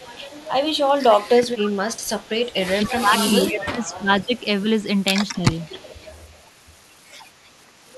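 Speech, and it's got an echo leak showing up in five spots: 0.0 to 0.49 s, 1.19 to 2.54 s, 2.83 to 2.9 s, 3.86 to 3.98 s and 5.61 to 6.28 s. Each time you hear a delayed copy of the talking trailing about 268 ms behind. It's most noticeable in the 1.19 to 2.54 s stretch and the short bit around 2.83 s, sitting only roughly 15 dB under the speech. Elsewhere it's faint. The likely cause is a loudspeaker on the far end whose echo canceller isn't fully removing what its mic picks up, so part of it gets sent back. There's also speech suppressed in double talk. Between 2.78 and 4.09 s the talker keeps dipping, about a second of it in total, dropping by around 15 dB at the deepest. There's another short dip at 5.76 to 5.87 s. Both happen while the echo is also present, so this is likely that canceller failing to separate the talker from the speaker echo and pulling both down.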